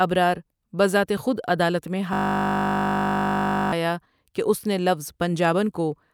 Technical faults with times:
2.13-3.72 system hang loop

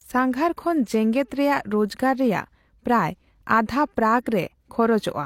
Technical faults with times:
4.24-4.26 pre-echo

